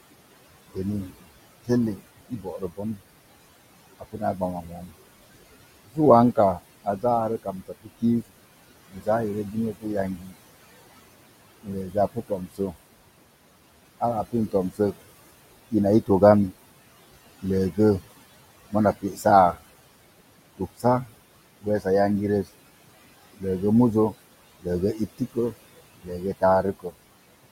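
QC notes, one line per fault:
throughout, noise suppressor artifacts: steady background pushed down by about 20 dB frame by frame, so the room noise, about 15 dB under speech, sinks in gaps and swells under syllables.
0.74–3.01 s, 3.99–4.92 s, 5.86–10.35 s, 11.63–12.76 s, 14.0–17.78 s, 18.71–19.57 s, 20.58–26.95 s, speech cut by the noise suppressor: soft consonants, word endings or a quiet phrase treated as noise and lowered by about 17 to 20 dB. This adds up to a fraction of a second to about a second in each stretch, sounding swallowed and faint.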